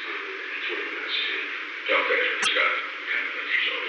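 Around 2.39 s there's a short glitch that runs to about 2.47 s, so roughly 80 ms. It's damaged data in a compressed stream: a patch of the encoded bytes got corrupted, so the decoder couldn't make sense of those frames, lost its footing, and had to hunt for the next valid frame header before carrying on. You hear it as a quick blip cutting into the sound, then things pick up again.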